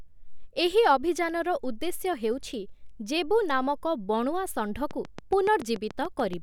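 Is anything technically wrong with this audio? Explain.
Yes. From 4.91 to 6.34 s there is a train of clicks, likely from electrical interference or a faulty connection or power supply injecting a pulse into the signal path. About ten similar clicks arrive at a steady 7 per second, peaking around 10 dB above the speech and ticking through the sound and its pauses.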